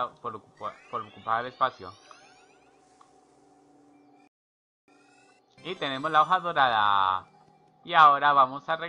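At 4.27 s the sound cuts to silence, then at 4.88 s picks up exactly where it stopped, with nothing skipped. This is a rebuffering stall: playback ran out of downloaded audio and waited for more, adding 0.61 s of dead air.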